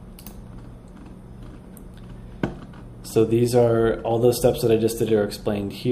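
Nothing in the audio stands out as a technical fault at any point, so there's nothing to flag here.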